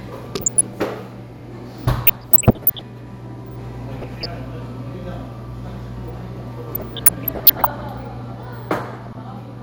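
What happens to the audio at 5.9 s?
Nothing goes wrong at 5.9 s; the sound carries on intact through that point with no audible fault.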